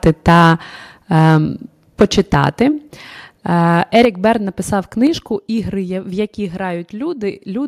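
Microphone overload, likely from input gain set too high, clips peaks at 0.03–0.53, 1.14–1.37, 2.0–2.63 and 3.95–4.32 s. It sounds as harsh crackle and shows as flattened waveform tops with broadband spectrogram smearing. A microphone volume step-down, likely automatic gain correction, drops the level by about 3, 7 and 5 dB at 2.02, 4.05 and 5.07 s, visible as sudden envelope drops.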